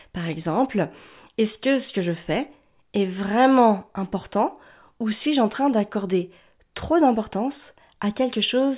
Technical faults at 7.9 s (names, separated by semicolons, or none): none